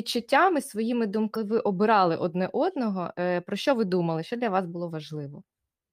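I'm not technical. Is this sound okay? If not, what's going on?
No, there's one glitch in this speech recording. At about 1.32 to 1.37 seconds, just before "ви обирали одне одного", there's a short glitch from damaged data in a compressed stream. The file stores sound in small packed chunks, and a few of those got scrambled. The player couldn't read them properly and searched ahead for the next good chunk.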